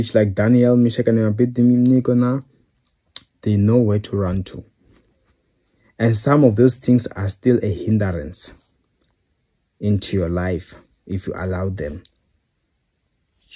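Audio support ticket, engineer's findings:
Listened through the whole clip and found nothing to flag, so there's no fault to report on this ticket.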